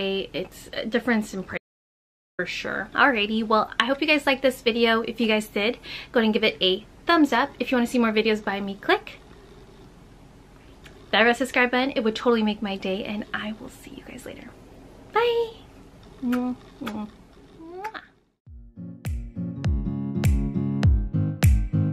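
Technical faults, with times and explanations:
1.58–2.39 s, audio dropout to silence: about 0.81 s of sound drops to silence with no room tone, likely from input signal loss while recording continued.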